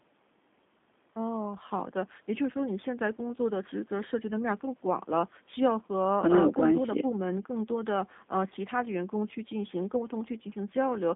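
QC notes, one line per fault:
throughout, G.729 codec: the speech has been squeezed through a low-rate CELP voice codec, which fits 8 kbit/s G.729A, rebuilding each 10 ms frame from a filter, pitch predictor and a few pulses, inside a 200 Hz to 3.6 kHz line band, so it sounds plainly rough, buzzy and synthetic with no highs.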